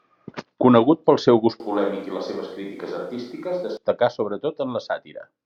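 Switch to a distant microphone at 1.6–3.77 s, after "pel seu gust": abruptly hollow, thin speech, about 10 dB quieter, likely a dropped close microphone.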